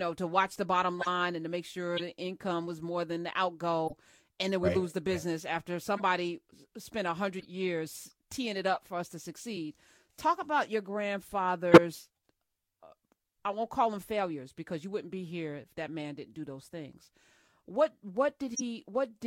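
Corrupt frame decoded, eight times in this speech: 0.99–1.07 s (after "to watch the bottom"), 1.97–2.02, 3.87–3.93, 5.97–6.02, 7.40–7.46, 8.74–8.77, 11.72–11.78 and 18.54–18.61 s. Each is a short chirp or noise blip spanning a few frames. Flipped bits left wrong gains or misread codes, yet the decoder played those frames, scattering energy into the wrong frequencies. The burst near 11.7 s is the loudest.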